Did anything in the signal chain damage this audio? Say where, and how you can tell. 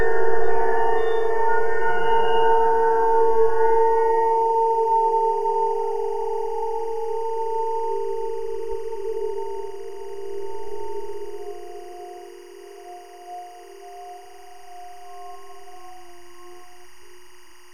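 Yes. Timecode bleed is present throughout. Linear timecode from an adjacent track or cable has leaked into the audio through the analogue wiring. A faint, steady chirping warble sits well beneath the sound, roughly 35 dB down. On a spectrogram it appears as two persistent bands near 1 kHz and 2 kHz, with harmonics above. These are the two pitches of the biphase square wave. The code's cadence fits 23.976 frames per second.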